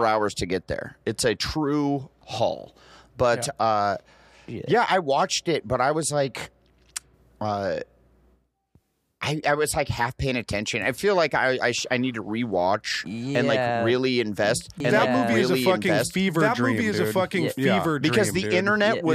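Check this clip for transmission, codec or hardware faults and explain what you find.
One fault: a doubled audio track from 14.80 s to the end. A full-band copy at about the same level trails about a second and a half behind, starting abruptly, likely from a second, slower capture path.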